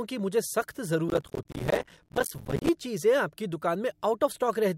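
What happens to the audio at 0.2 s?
Nothing goes wrong at 0.2 s; the speech there plays through intact, with no dropout, click, distortion or other fault.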